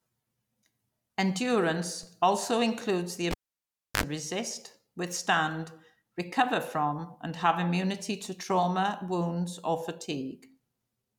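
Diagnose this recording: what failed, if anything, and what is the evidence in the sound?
Converter DC step: at 2.03 s, just before "also includes the", the zero line jumps by about -40 dBFS, a low thump that then decays through a 20 Hz high-pass.

Cable pulled and plugged in, in the analogue wiring: pop at 3.31 s, 672 ms near silence, 62 ms of 50 Hz mains buzz, then a pop at 4.03 s before "resist withstand recover from".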